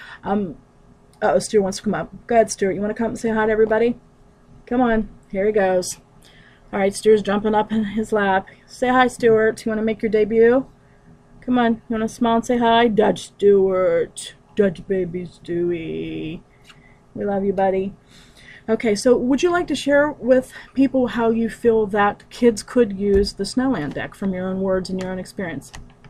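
No technical faults can be heard anywhere in this audio.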